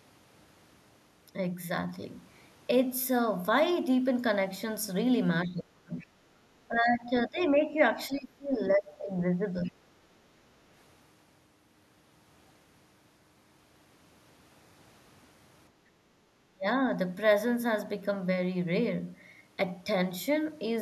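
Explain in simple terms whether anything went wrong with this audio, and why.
Speech suppressed in double talk: when both sides likely talked at once, the echo canceller turned the speech down. It dips or cuts out at 5.46–6.06, 6.68–7.79, 8.08–9.81 and 16.49–16.87 s.

Other side's voice leaking through: the echo canceller likely missed part of the loudspeaker sound. A faint second voice slips in at 5.99–6.07 and 9.65–9.87 s.

Background gated by the echo canceller: the canceller briefly turned the microphone down while the loudspeaker played, so the room sound dips for a moment at 15.72–16.05 s.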